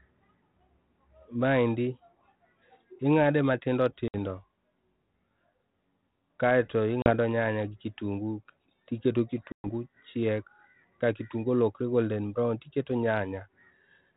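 At 4.08 s, after "ingade matindo", packet loss on an ADPCM call cuts a hard-edged 60 ms silence. The decoder's predictor and step size drift from the sender's. The sound returns with brief distortion.

From 4.30 to 6.30 s the sound turns rough and slightly doubled. This is channel delay causing comb filtering. One channel runs about 20 ms late. Summed to mono, the two cancel at evenly spaced notches, the first near 20 Hz.

At 7.02 s, 40 ms drops out before "nyanya gi kitungu tiketo". At 9.52 s, 120 ms vanishes before "chiek ka kitungu".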